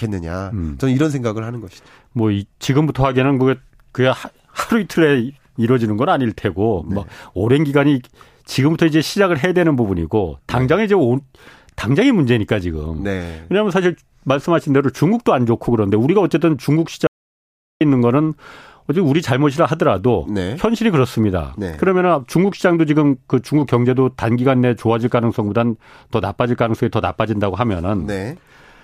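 At 17.07 s the speech cuts off abruptly into an audio dropout to silence lasting about 0.74 s, resuming mid-flow at 17.81 s. The gap is silent with no room tone, so the input was likely lost upstream while the recorder kept writing zeros. Whatever was spoken in that stretch is gone. On a waveform it shows as a flat line between hard edges; a spectrogram shows a clean black vertical band across all frequencies.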